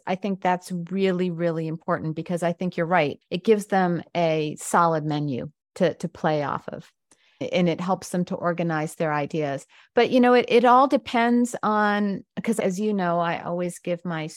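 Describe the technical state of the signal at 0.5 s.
At 0.5 s the speech signal is intact, with no audible fault at that moment.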